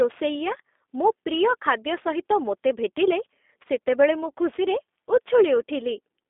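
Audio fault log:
throughout, sample clock jitter: grainy hiss tracks loud, bright speech and vanishes in pauses; timing wander of around 10 microseconds leaves error roughly 20 dB below signal.
throughout, G.729 codec: speech sounds narrow, rough and faintly synthetic, held to 250 Hz–3.6 kHz, nothing above 3.7 kHz, fitting an 8 kbit/s model-based coder.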